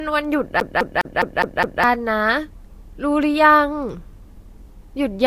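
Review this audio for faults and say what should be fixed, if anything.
CD stuck on one turn, 0.60 to 1.84 s: a 0.21 s stretch of speech plays six times in a row, with a brief mute at each jump. This is the even stutter of a laser thrown back at the same scratched spot on every revolution. Prevention: re-rip from a clean disc using a secure-ripping tool that verifies each read.

Low-bitrate audio saved at a high bitrate, throughout: nothing is present above 16.9 kHz, and earlier coding artefacts remain in the speech even though the final MP3 is a high-bitrate file. Those artefacts likely come from a low-bitrate first encode, which the second encode cannot undo. Prevention: encode once, directly from a lossless source.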